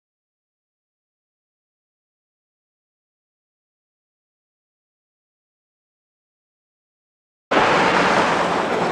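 No dropouts, clicks, distortion or level jumps can be heard anywhere in the audio.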